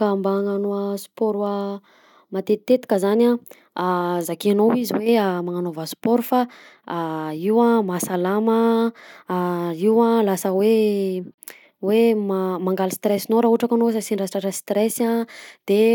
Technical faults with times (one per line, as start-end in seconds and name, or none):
6.04 block of digital silence
11.34-11.38 block of digital silence